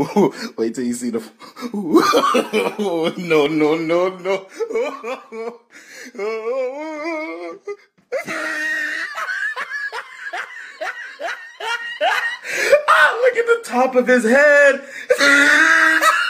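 No technical faults are audible.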